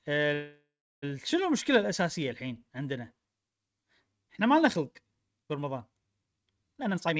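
From 0.34 to 1.04 s there is a call audio freeze. The sound stops moving forward. The last sound carries on as a fading buzz or hiss, then about 0.31 s of near silence. This likely happened because packets were held up and the jitter buffer ran dry. The receiver filled about 0.69 s. When the packets arrived, the audio resumed where it stopped, so nothing is lost. It is only delayed by that amount.

From 6.77 to 7.19 s there is a jitter buffer speed-up. The buffer had built up extra delay, which fits the backlog left by the freeze. To shed it, the receiver cut many tiny pitch-length pieces in quick succession, removing roughly 0.3 s. The speech plays at about 181% speed with its pitch unchanged. It sounds rushed. Throughout, nothing is heard above 8 kHz, which fits a wideband G.722 call codec.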